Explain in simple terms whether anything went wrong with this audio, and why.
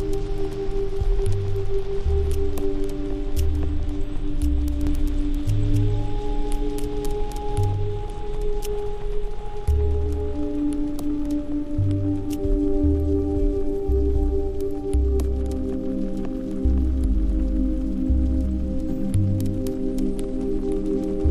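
Something in the recording chain likely picked up the audio twice, with one copy arriving late. From 4.87 to 7.73 seconds this causes a doubled audio track: an equally loud repeat trails about a third of a second behind, then stops suddenly.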